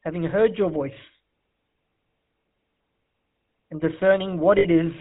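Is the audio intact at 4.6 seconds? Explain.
No. From 4.58 to 4.65 s the sound holds as a brief rough, metallic ring. These are lost GSM frames: about 60 ms of missing data was filled by repeating the last good frame at falling level. Throughout, including this moment, a buzzy, gravelly roughness with nothing above 4 kHz comes from the GSM full-rate codec's coarse pulse-driven vocal-tract model.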